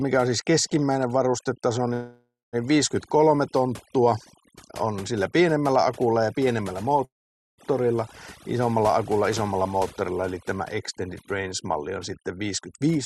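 Through the whole speech clip, overdone noise removal is at work: the suppressor treats anything near its noise estimate as noise and drives those frequency bands almost to nothing, taking the softer parts of the voice with them. The background collapses into near-silence scattered with twinkling specks. The call path's own coding leaves the top end stopping around 12 kHz.

A call audio freeze follows at 1.93 s, just after "on siis keskimmäinen varustetaso", most likely because packets were delayed and the jitter buffer ran dry. For about 0.6 s the receiver stretches the last sound into a fading buzz, ending in roughly 0.2 s of silence. The speech then picks up exactly where it stopped, so nothing is lost but everything after arrives later.

A second call audio freeze occurs at 7.05 s, after "pienemmällä akulla ja pienemmällä", again likely from a buffer underrun. This gap lasts about 0.53 s, and almost all of it is silence, with only a brief tail of concealment sound before it. 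The voice resumes with no words missing, and the lag grows further.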